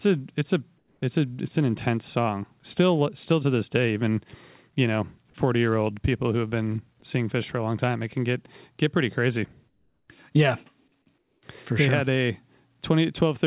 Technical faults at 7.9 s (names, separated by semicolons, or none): none